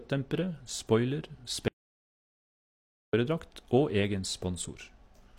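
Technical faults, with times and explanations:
1.68 to 3.13 s, audio dropout to silence: speech stops mid-flow for 1.45 s of dead silence with no room tone, unlike a natural pause; likely lost input.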